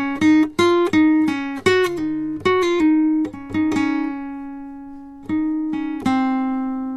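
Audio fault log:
No faults turned up anywhere in this bit of music, so there's nothing to log here.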